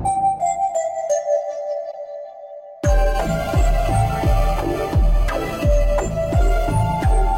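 A music clip with one corrupt frame decoded, from 1.91 to 1.94 s. For about 36 ms a short burst of misplaced energy appears in the music, peaking at around -20 dBFS. That is a glitch rather than part of the mix. The length points to roughly two damaged compressed frames. The decoder read their corrupted bits as valid gain and spectral data and played the result, placing energy at frequencies where it does not belong.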